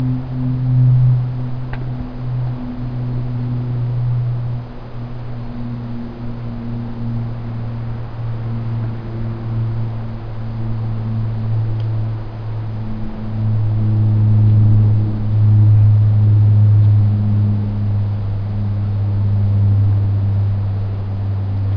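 Nothing in this everyday-sound recording stands out as a technical fault; it just runs along as it is.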